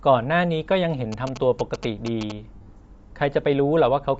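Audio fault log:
throughout, Bluetooth LC3 compression: the speech has a breathy, grainy edge, and its upper band sounds thinned and replaced by hiss. The likely cause is an LC3 transform codec running near 32 kbps, which discards much of the top spectrum and fills it with noise.
1.12–2.32 s, GSM signalling bursts: a galloping dit-dit-dit of short 217 Hz buzzes sits roughly 10 dB below the speech. A nearby 2G phone sending signalling bursts is being rectified by the audio circuit, which turns its radio pulses into audible buzz.
2.55–2.69 s, lost LE Audio frames: the speech briefly smears into a noisy wash, with gaps totalling 120 ms spread over 140 ms. The longest run is around 70 ms. The decoder concealed the missing frames by repeating the last spectrum with scrambled signs.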